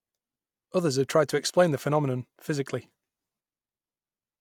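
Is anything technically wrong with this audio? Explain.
No, no technical faults here.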